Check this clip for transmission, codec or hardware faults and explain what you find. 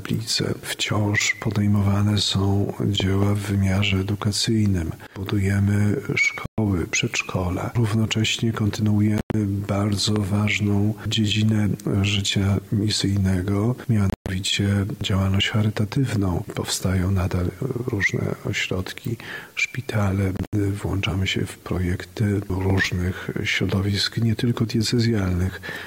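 Yes, there are two kinds of fault: three loud pop events and four Bluetooth dropouts.

Loud pops occur as a pair between 3.00 and 3.25 s, as a single pop at 10.16 to 10.18 s, and as a pair between 22.70 and 22.80 s. Each peaks about 15 dB above the programme. They are likely voltage spikes from a switch, plug, static or driver glitch that the downstream circuitry shapes into a brief pulse. On the waveform they appear as tall, narrow spikes. On a spectrogram they show as thin full-height vertical lines. The sound continues underneath them.

The Bluetooth dropouts sit at 6.46 to 6.58 s (120 ms of silence), 9.18 to 9.34 s (about 130 ms lost in pieces over 160 ms, the longest gap 93 ms), 14.10 to 14.29 s (160 ms lost over about 190 ms, the longest 120 ms) and 20.37 to 20.53 s (about 107 ms lost over 160 ms, the longest 67 ms). They are likely caused by audio packets arriving too late for the headphones and being discarded. 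The waveform shows flat gaps. The spectrogram shows blank vertical bands, and the sound resumes as though it had kept playing.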